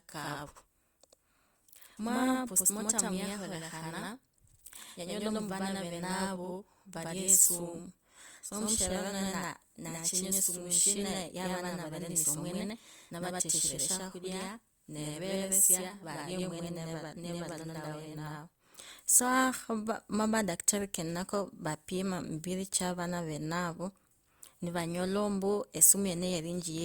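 From the start until 18.8 s, one channel runs behind the other by about 92.9 ms, which fits a 4096-sample buffer, and the two are then summed to mono. This is channel delay (doubling). Because the late copy arrives well past the point where the ear would fuse it, each syllable of the speech is heard twice at equal level, as a distinct slap echo trailing the original. It gives the voice a stuttering doubled quality until it stops at 18.8 s.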